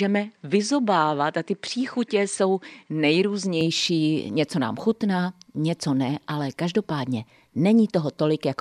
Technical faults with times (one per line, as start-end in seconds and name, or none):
0.00-3.61 input switched to a poorer device